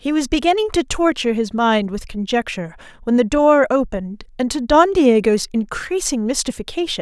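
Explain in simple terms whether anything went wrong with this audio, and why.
Nothing went wrong: no audible faults anywhere in the recording, so there's nothing to flag.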